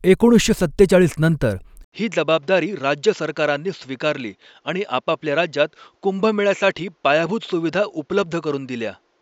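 An input switched to a poorer device at 1.84 s, just after "एकोणीसशे सत्तेचाळीस नंतर", and the speech stays that way to the end. An 80 ms gap marks the change, likely the recording moving to a different microphone. From then on nothing is heard above 7.6 kHz, so the sound turns duller, drops about 5 dB in level, and picks up a new background noise sitting some 45 dB beneath the speech.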